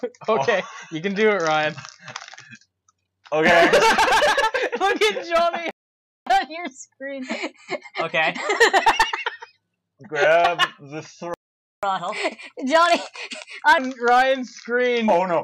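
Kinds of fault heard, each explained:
Playback stall: the sound drops to silence for 0.56 s at 5.71 s and 0.49 s at 11.34 s, likely from the player being starved or blocked.
Catch-up at higher speed: after each gap the audio runs fast and higher in pitch, 1.15x for 3 s, then 1.25x for 1.95 s, as the backlog is resampled.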